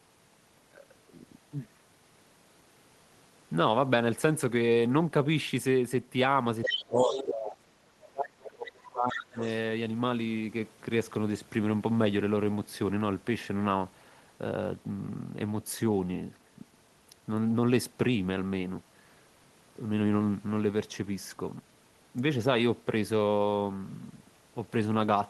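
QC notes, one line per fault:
6.63–9.55 s (6.63–6.79, 7.02–7.23, 8.43–8.47, 9.11–9.16, 9.41–9.55 s), other side's voice leaking through: brief scraps of a second voice, the first two only about 5 to 10 dB under the talker, later ones faint, near 20 to 25 dB down. The likely cause is loudspeaker echo left in by the echo canceller. On a spectrogram they show as harmonic traces overlapping the talker's.
6.67–7.58 s and 7.92–9.41 s, speech suppressed in double talk: the talker's level sinks by up to about 25 dB, then about 30 dB, for roughly 0.7 s and 1.5 s in total. It is likely the canceller ducking both voices while each side spoke at once. The waveform envelope shows sudden dips.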